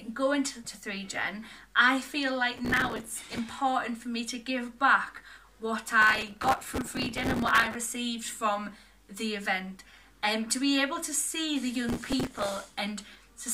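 Processor overload crackle occurs at 2.58–3.38 s, 6.02–7.75 s and 11.89–12.74 s. The processor misses buffer deadlines over and over, apparently with buffers of just a few milliseconds. Each miss replays stale audio with hard edges, producing gritty tearing until the load eases.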